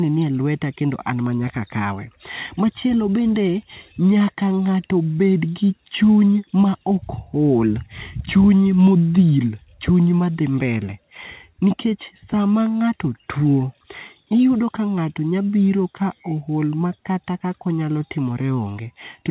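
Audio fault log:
4.18 to 4.22 s, short concealed packet loss: about 20 ms of audio failed to reach the decoder in time, and the receiver covered the gap by extending the preceding sound, repeating its pitch if voiced or generating shaped noise if not. About 15 ms of the gap was filled this way before the fill blends back into the real signal. The result is a brief smear or wobble, heard against the narrowband call sound, which has nothing above 4 kHz and fits G.711 telephone coding.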